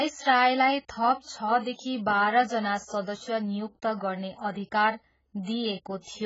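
From start to end, the speech carries the marks of heavy AAC compression, likely from AAC-LC at a very low bitrate; the damage fits something near 12 kbps. Nothing sounds above about 7.6 kHz, so sibilants lose their edge and the voice turns dull, with a warbling, fizzy texture on sustained sounds. On a spectrogram the energy ends at a flat ceiling near 7.6 kHz, and the bands below it show patchy holes and blocky smearing over time.

At 4.51 to 4.56 s a sharp onset is preceded by pre-echo: a short hiss running about 46 ms ahead of the attack. The codec spread its quantisation noise across a whole transform block, and noise sized for the loud onset leaked into the quiet stretch before it, so the attack sounds softened and smeared. In the waveform, a low fuzzy skirt rises just before the transient, and on a spectrogram a broadband smudge appears just ahead of the onset.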